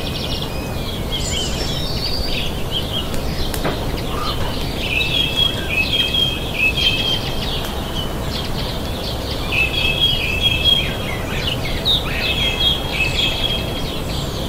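A grainy hiss rides on top of the audio for its whole length. It thickens on loud passages and bright, high-frequency material, and drops away entirely in silence. That is sample clock jitter. The converter's clock wanders by a few microseconds, so each sample is captured slightly off time. Steep, fast-moving parts of the waveform turn that timing error into amplitude error, leaving a noise floor that tracks the signal at around 30 dB below it.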